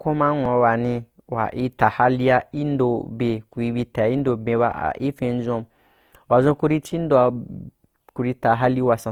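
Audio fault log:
throughout: Opus compression. Speech sounds rough and grainy, with the band energy kept but the detail filled in noisily, likely from Opus music-mode coding at a rate near 24 kbps.
0.45 s, 4.72 s: underrun with held sample. Output stalls for 2.2 ms and 2.9 ms, with the level frozen flat. Playback then resumes where it stopped, giving only a soft click.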